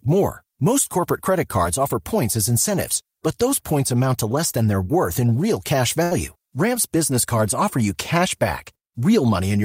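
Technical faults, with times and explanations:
6.03–6.14 s, burst of packet loss: after "worth in real cash", the last sound is held and faded across the gap, then speech resumes with about 80 ms missing.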